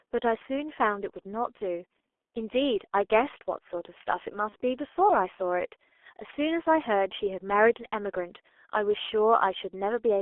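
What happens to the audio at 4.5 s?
Right around 4.49 to 4.56 s there's a short dropout from VoIP packet loss concealed by the speech codec. About 30 ms of data went missing, which fits one lost frame, and the decoder papered over it by carrying its last pitch and filter forward at falling gain. You hear a brief smeared blip of buzzy tone or coloured noise, and the voice stays weak or warped just after.

Underneath all of that sits the G.723.1 codec, which runs through the whole clip. The sound is squeezed into roughly 300 Hz to 3.5 kHz and heavily coded, consistent with a rate near 6.3 kbit/s, so it comes across muffled and hoarse, with fuzzy consonants.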